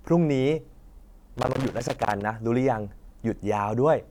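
An irregular burst of crackle and scratching cuts through the speech from 1.37 to 2.22 s: loose connector crackle, a worn contact making and breaking the signal.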